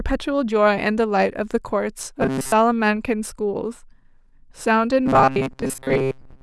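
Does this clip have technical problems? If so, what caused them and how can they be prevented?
Yes. From 2.21 to 2.52 s and from 5.06 s to the end, the speech becomes a rigid metallic buzz at 133 Hz, which is robotic sound from repeated short buffers. A block of about 7.5 ms is likely being replayed while most real audio is skipped. A larger playback buffer or steadier audio delivery prevents it.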